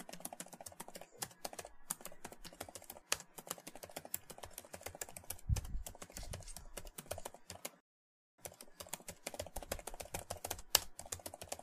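At 7.80 s there's a rebuffering stall: the player ran dry of downloaded audio and simply waited, so the sound drops to silence until 8.38 s, then picks up exactly where it left off. Nothing's missing, you just get about 0.58 s of dead air inserted.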